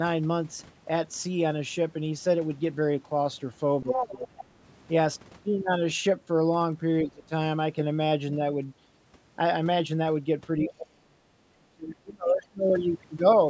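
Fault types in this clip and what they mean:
Speech suppressed in double talk: the voice sinks at 3.83–4.3, 7.03–7.32, 10.58–11.26 and 11.52–12.62 s, by about 15 dB at first and almost to silence later, likely an echo canceller ducking everything while both sides spoke. Unlike a network dropout, it dims and recovers rather than cutting cleanly.
Other side's voice leaking through: a second voice surfaces at 3.91–4.09 s, nearly as loud as the talker, and very faintly around 12.3 s, likely loudspeaker echo the canceller failed to remove. Unlike room reverberation, it is a different talker, not a smeared copy of the main voice.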